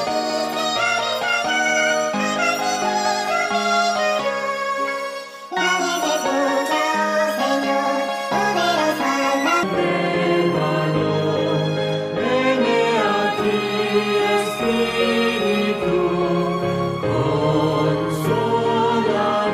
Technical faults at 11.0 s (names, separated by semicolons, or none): none